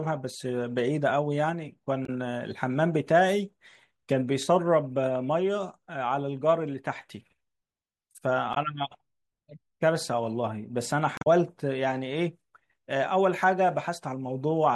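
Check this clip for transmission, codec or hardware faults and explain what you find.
Three short faults are present, all of one kind: damaged data in a compressed stream. They occur at 2.05–2.09 s, 8.53–8.57 s and 11.15–11.27 s. Corrupted bytes make the decoder lose frame sync, producing brief chirps or blips in the speech.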